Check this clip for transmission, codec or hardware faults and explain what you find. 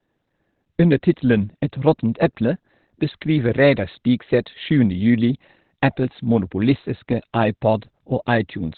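One fault runs through the whole clip: heavy Opus compression is the likely cause. Nothing is left above about 4.4 kHz, so the speech is narrowband, muffled and hoarse. That points to the codec's speech (SILK) mode at a very low bitrate, around 12 kbps. It differs from MP3 damage because there is less swirling or watery warble from spectral holes. It also differs from a plain low-pass filter, because the remaining band itself sounds hoarse rather than clean.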